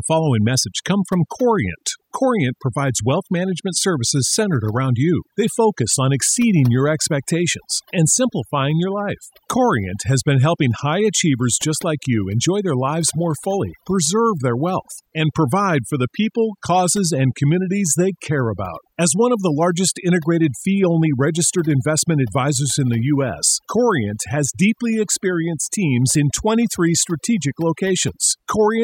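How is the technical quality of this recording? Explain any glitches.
Not great: the whole clip has overdone noise removal. The denoiser was set too hard, so bands near its noise estimate get gated out, leaving a twinkly near-silent background and taking quiet parts of the voice with them.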